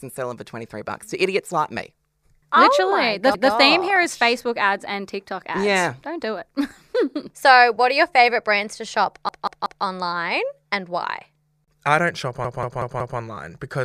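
A repeated buffer stutters at 3.34 s, just before "theme here is", then at 9.29 s after "favorite brands to shop", and at 12.45 s after "why I don't shop". Late audio made the device replay a 0.19 s chunk, fitting an 8192-sample buffer. Each replay ends in a hard join. The chunk repeats once, then three times, then four.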